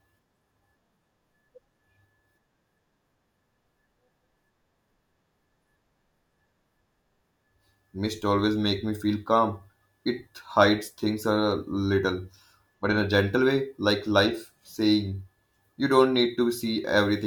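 From 1.29 s to 16.62 s, a click recurs every 2.56 s, about seven times. These are clock drift buffer slips. Two devices likely run on mismatched clocks, roughly 150 ppm apart, so a short block of samples is periodically dropped or repeated.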